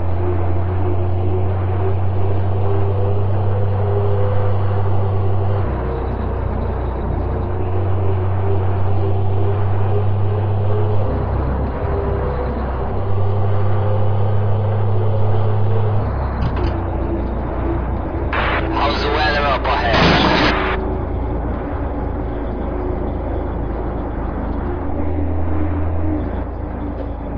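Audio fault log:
No faults can be heard anywhere in the audio.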